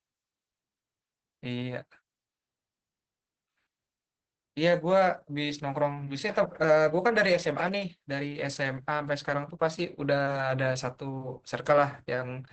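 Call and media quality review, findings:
Speech muffled, hoarse and slightly robotic across the whole clip, with nothing above about 8 kHz and a coarse, buzzy texture. Probable component: Opus voice compression, SILK mode, wideband. Low-rate linear-prediction coding quantises the excitation coarsely. The level of damage points to a bitrate near 10 kbps.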